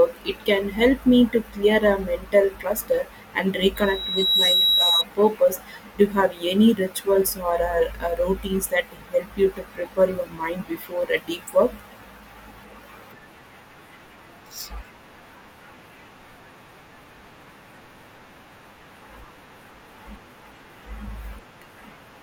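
Speech, with a loudspeaker feedback squeal from 3.76 to 5.05 s. A single tone at about 3.9 kHz swells up over roughly the first 0.7 s and then sits around 5 dB above the speech until it cuts off. The mic is hearing the speaker it feeds, and at that one frequency the loop gain tops one, so the tone keeps feeding itself until the amplifier limits it or the loop gets broken.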